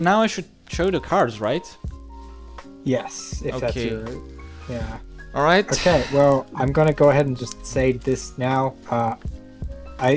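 From start to finish the audio carries a resampler restarted on every block. The conversion from 48 kHz down to 16 kHz was run on 40 ms blocks in isolation, so each block edge lacks its true neighbouring samples and picks up a small error. These errors recur 25 times a second, heard as a rough buzz that rises and falls with the signal and vanishes in quiet passages. Mains hum, by contrast, would persist through silence.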